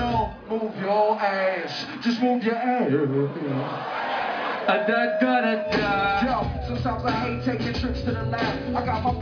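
No technical faults can be heard anywhere in this audio.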